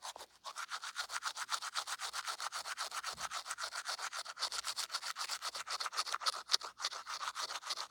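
No technical fault can be heard anywhere in this recording of sound. The audio runs without any break, glitch or damage to mark.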